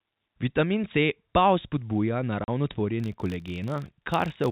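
At 2.44 to 2.48 s, packet loss filled with silence cuts a 40 ms hole into the speech, which fits two lost 20 ms packets, with hard edges. From 3.0 s to the end, a filter restarted on every block begins each block from zero, leaving a 50 Hz buzz that tracks the speech level over the telephone-band G.711 sound.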